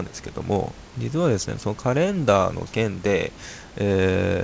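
Nothing stood out on listening to this speech clip, beyond the expected call-codec bandwidth with nothing above 8 kHz and a low room background about 25 dB under the speech.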